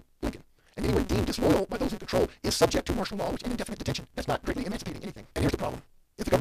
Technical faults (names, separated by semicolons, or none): block size mismatch (truncated)